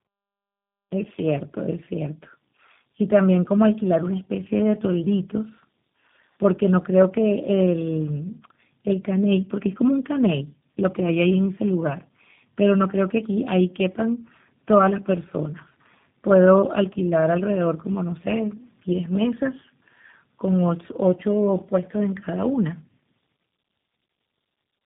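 From start to finish the speech sounds rough, muffled and warbly, with nothing above 3.8 kHz. This is tandem speech coding: the audio was decoded and re-encoded in turn by what sounds like three speech codecs, each compounding the previous one's damage.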